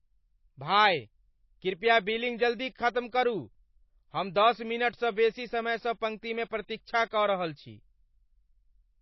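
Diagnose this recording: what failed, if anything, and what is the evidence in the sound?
Codec stage: the speech has nothing above 5.8 kHz throughout, likely low-bitrate audio saved at a high bitrate. The second MP3 pass cannot restore what the first removed.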